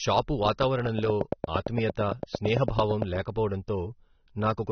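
Throughout, the speech was likely squeezed through low-bitrate AAC compression, consistent with roughly 27 kbps: nothing survives above 6.3 kHz, leaving the voice dull, smeared and audibly warbly. From 0.99 to 3.03 s, a train of clicks, likely from interference or a faulty connection, ticks at a steady 8.8 per second, about twenty sharp pops standing well above the speech.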